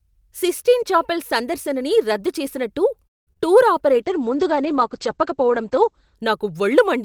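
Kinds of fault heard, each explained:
Call audio freeze: after "చాపెల్ సందర్శనని రద్దు చేసినట్టు" the sound stops for about 0.2 s of near-silence, likely delayed packets emptying the jitter buffer, then resumes intact.
Short concealed packet loss: two brief smears at 3.33 and 3.37 s, where about 20 ms each went missing and the receiver patched over them by extending the preceding sound.
Call bitrate drop: from 3.92 to 6.23 s the sound turns muffled and rough, as the encoder fell from 40 to 11 kbps and bandwidth shrank from 20 kHz to 8 kHz.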